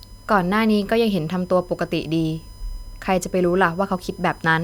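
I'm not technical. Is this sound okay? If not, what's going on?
No. A steady high whine runs under the speech throughout. This is USB whine: computer power noise leaking in, pitched at 1 kHz, loudest near 5 kHz.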